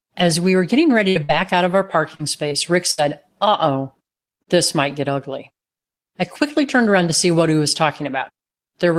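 Speech, marred by two kinds of dropout during transmission. Three bursts of packet loss fall at 1.09 to 1.17 s, 1.23 to 1.31 s and 2.91 to 3.02 s. In each, about 60 ms of audio went missing and the receiver stretched the last sound for roughly 57 ms (67 ms in the third) while fading it, so a held buzz or dying hiss gives way to speech resuming further on, with material skipped. In the third, about 7 ms more is cut at the rejoin. Short concealed packet loss is shorter and subtler. At 2.15 to 2.21 s, 2.49 to 2.53 s and 4.43 to 4.49 s, gaps of about 20 to 40 ms were patched with continued pitch or shaped noise and blended straight back into the real signal. The result is a brief smear or wobble rather than a decaying buzz, and a consonant there can drop out.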